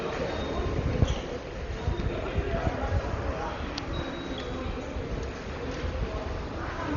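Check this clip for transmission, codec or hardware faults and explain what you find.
There is one fault, and it runs through the whole clip. The sound is dull and muffled, with nothing above 7 kHz, and a rough, fluttering grain clings to any steady tones. The likely cause is heavy Dolby Digital compression at a very low bitrate, in the region of 32 kbps. Starved of bits, the encoder cut the upper band away and left many frequency lines without detail, and the decoder filled them with noise that wavers around the tones.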